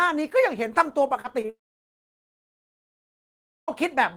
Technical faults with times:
1.21-1.50 short concealed packet loss
1.50-3.84 long network dropout

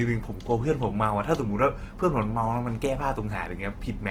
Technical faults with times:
0.00-4.10 Opus compression

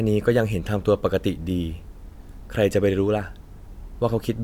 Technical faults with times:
none

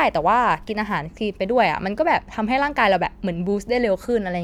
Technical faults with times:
0.68-0.70 corrupt frame decoded

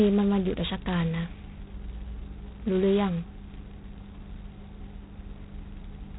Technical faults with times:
0.00-6.18 G.726 ADPCM

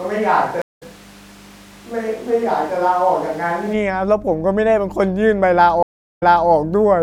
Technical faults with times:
0.00-7.03 mains hum
0.00-3.72 switch to a distant microphone
0.62-0.83 stream reconnect
5.83-6.50 stream reconnect

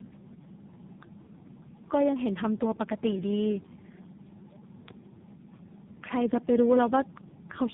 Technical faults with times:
0.00-7.73 tandem speech coding

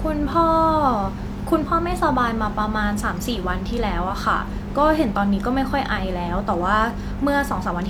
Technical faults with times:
none

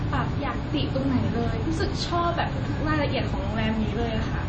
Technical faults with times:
0.00-4.49 MP3 compression

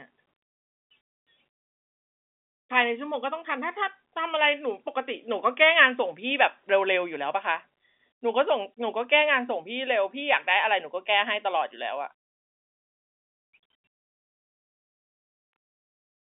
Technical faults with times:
none

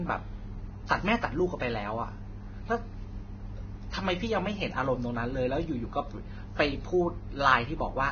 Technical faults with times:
0.00-8.11 Vorbis compression

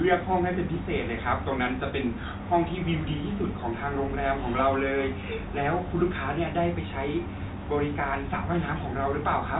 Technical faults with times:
none

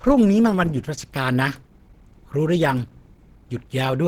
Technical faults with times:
0.00-4.07 Opus compression

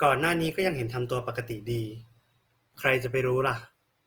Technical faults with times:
0.00-4.06 Opus compression

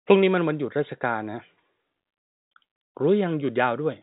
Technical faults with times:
none

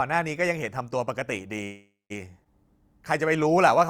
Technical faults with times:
1.63-2.12 call audio freeze
2.44-2.47 skip ahead
3.28-3.86 jitter buffer slow-down

